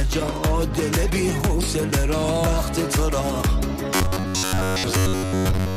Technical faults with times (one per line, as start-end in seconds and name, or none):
3.95-5.76 robotic sound from repeated short buffers